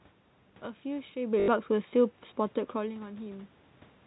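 A short robotic stutter cuts into the speech from 1.40 to 1.48 s, with a buzzing quality where the sound should carry on smoothly. This is packet loss with the last packet repeated: about 80 ms of audio never arrived, and the receiver replayed the most recent packet to fill the gap. The repeats seldom line up with the pitch, and the buzz fits four 20 ms packets cycling at 50 Hz.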